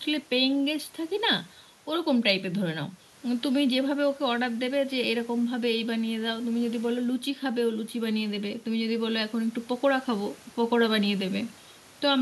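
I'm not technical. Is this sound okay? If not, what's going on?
Yes, nothing stood out as a problem when I listened to this speech recording.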